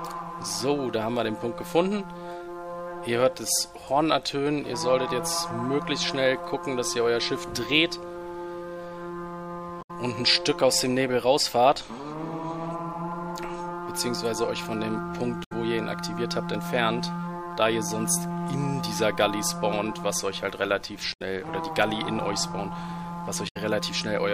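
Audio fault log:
9.81–9.91 s, 15.43–15.52 s, 21.12–21.22 s and 23.47–23.57 s: damaged data in a compressed stream. Each is a roughly 95 ms squawk or blip where corrupted bytes make the decoder misread frames, lose sync and hunt for the next valid frame header. On a spectrogram each shows as a short vertical smear of broadband or oddly banded energy unrelated to the surrounding content. The waveform has an abrupt burst or discontinuity at those points.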